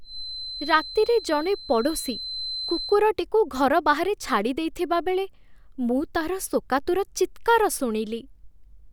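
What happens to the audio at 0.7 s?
A feedback whistle, a thin one-pitch tone near 4.1 kHz about 10 dB under the speech, runs from 0.0 to 3.02 s, ending before "ଘର ବାହାରେ ଛାଡ଼ିଦେଇଥିବାବେଳେ". It is likely a speaker-to-microphone loop held at the edge of feedback, unlike low mains hum.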